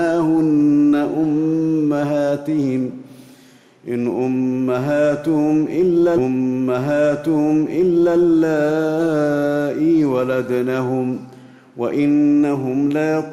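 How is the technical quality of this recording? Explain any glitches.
There is one glitch. From 6.17 to 8.17 s, a 2-second stretch plays twice with a small blip at the jump back: a stream segment repeated because the player fetched or queued the same segment again.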